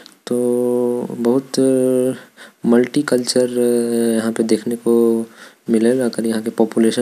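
No technical faults are audible.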